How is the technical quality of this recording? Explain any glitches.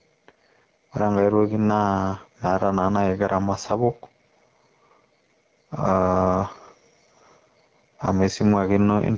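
Technical quality is poor: two faults run through the whole recording.

Gain pumping, throughout: input gain was likely set far too high, so a fast limiter clamps down on each loud sound. The level swings by about 5 dB.

AMR wideband (HD Voice) codec, throughout: the speech was coded at one of AMR-WB's two lowest rates, which fits 8.85 kbit/s. Its sparse pulse model leaves the speech plainly rough and raspy.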